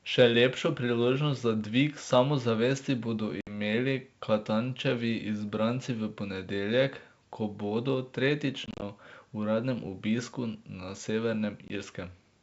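A speech clip carried over a G.722 wideband call shows packet loss on an ADPCM call. Silent holes cut in at 3.41 s (60 ms), from 8.66 to 8.82 s (100 ms in gaps, longest 30 ms), and at 11.68 s (20 ms). Each time, the decoder's predictor drifts from the sender's. Speech returns slightly distorted, then settles.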